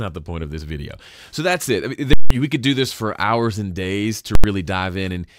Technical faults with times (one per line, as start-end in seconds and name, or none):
2.13-2.30 invalid numbers at full scale
4.35-4.44 invalid numbers at full scale